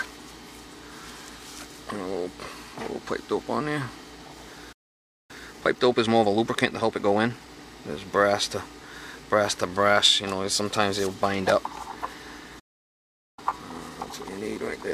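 At 4.72 s the sound stops dead and stays silent for about 0.57 s before resuming at 5.31 s. This is a playback stall, most likely the player running out of buffered data or its output thread being held up. What separates it from a packet dropout is that the silence is a clean, sustained hole lasting over half a second, not a brief clipped gap or a burst of filled-in noise.

From 5.31 s to 7.57 s comes time-compressed catch-up. The audio runs about 1.25 times faster while its pitch stays where it was, because the player drops small slices and cross-fades across the joins to work off the backlog built up during the stall. That unchanged pitch rules out a simple sample-rate speed-up, which would raise the pitch.

The pattern repeats later. A second stall at 12.59 s leaves about 0.78 s of silence, and the resumption at 13.39 s is followed by gentler catch-up at about 1.1 times speed, which carries on to the end.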